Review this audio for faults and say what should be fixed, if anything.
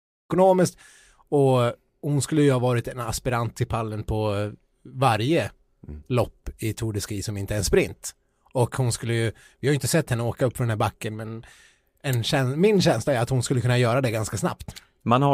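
No faults heard; nothing here needs fixing.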